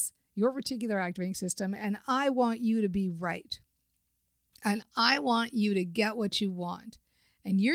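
Nothing technically wrong turns up anywhere in this short speech recording, so there are no fault times or causes to report.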